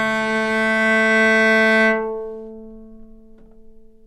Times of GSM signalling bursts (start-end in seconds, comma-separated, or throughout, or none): none